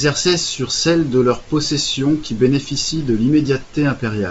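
No technical faults are audible.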